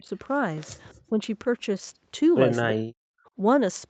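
From 0.0 to 0.09 s the speech dips by roughly 15 dB. This is likely speech suppressed in double talk, where the echo canceller ducked the near talker.

At 0.89 to 0.94 s a faint copy of the voice returns about 331 ms late, around 35 dB below the speech. This is likely an echo leak.

A slight dip of roughly 5 dB follows at 1.09 to 1.14 s. From 2.76 to 3.05 s the speech nearly cuts out, falling by roughly 40 dB.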